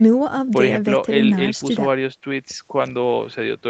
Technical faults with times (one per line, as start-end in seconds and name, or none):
none